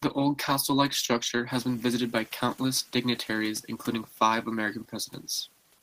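At 4.1 to 4.19 s, just after "countless dignitaries including", there is speech cut by the noise suppressor. The suppressor mistook part of the speech for background and pulled it down by about 9 dB for roughly a tenth of a second, so that stretch sounds swallowed and faint. On a waveform the envelope dips briefly mid-phrase. On a spectrogram the harmonics and upper consonant energy thin out there, while the room noise, which steps up by about 13 dB around a second and a half in and stays about 26 dB below the speech, is pulled down along with it.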